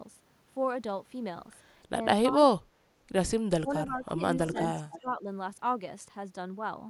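Speech suppressed in double talk first appears at 2.32 to 2.38 s as a slight dip of about 5 dB. From 2.54 to 2.89 s the voice is pushed down by as much as 35 dB and nearly vanishes. Further dips of about 20 dB follow at 3.61 to 4.23 s and 4.74 to 5.25 s, with a small one of about 5 dB at 4.48 to 4.55 s. The likely cause is an echo canceller that turned down the near talker while the far side was also active. On a waveform these show as notched or hollowed sections of the envelope. On a spectrogram the energy thins out in patches.

Echo leak shows up at 4.54 to 4.63 s and again at 4.90 to 5.01 s. In each, a faint copy of the voice trails the original by 285 ms, at about 10 dB and then about 20 dB below the speech. This is likely loudspeaker sound that the canceller failed to remove. It sounds like a brief ghost of the voice. On a spectrogram it appears as weaker repeated harmonic traces, shifted 285 ms later in time.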